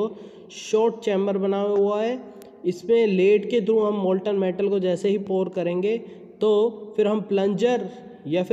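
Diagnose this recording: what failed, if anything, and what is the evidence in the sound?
A bit error spike at 2.42 s: one flipped bit in storage or a digital link. A single sample jumps to about -17 dBFS, giving one broadband tick.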